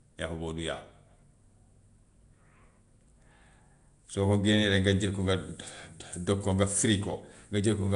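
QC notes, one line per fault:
throughout, likely Nellymoser compression: plainly audible rough, hissy halo and underwater smearing, nothing above 10.6 kHz, fitting about 44 kbps; starved bands are noise-filled, not MP3-style swirling.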